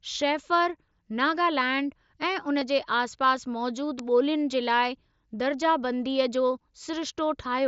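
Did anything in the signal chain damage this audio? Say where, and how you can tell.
Yes, two faults. The first is concealed Bluetooth headset packet loss on the wireless link between headset and phone, at 2.60 s, just after "शैफर नागालैंड ऐं उन". About 15 ms of audio went missing, which fits two lost 7.5 ms mSBC frames. The receiver filled the gap by repeating the best-matching stretch of the preceding waveform.

The second is an electrical switching spike in the analogue wiring at 3.99 s. It is a sharp snap or tight cluster of clicks lasting about 2 ms, added on top of the audio rather than replacing it. That points to an external source, likely a nearby switch, motor or static discharge arcing briefly, with the audio line picking up the burst as an induced transient.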